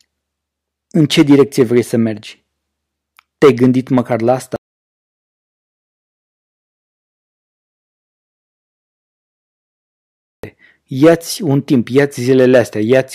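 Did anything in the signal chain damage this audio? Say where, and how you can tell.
Yes. An audio dropout to silence runs from 4.56 s to 10.44 s, wiping about 5.9 s of speech. The speech cuts off abruptly into silence with no room tone, then resumes mid-flow, which points to input loss upstream, likely a disconnected device or failed link.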